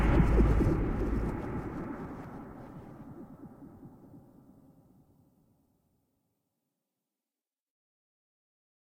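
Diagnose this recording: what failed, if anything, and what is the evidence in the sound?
Nothing in the chain seems to have failed here; the sound holds together with no dropouts, glitches or distortion to point at any stage.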